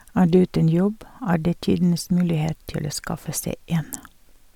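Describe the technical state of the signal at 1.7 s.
At 1.7 s the speech carries generation loss, present across the whole clip: a swirly, hollow, smeared quality with blurred onsets, likely from about four successive MP3 encodes near 140 kbit/s, each requantising on a shifted frame grid. A spectrogram shows patchy spectral holes below a cut-off at 20.1 kHz.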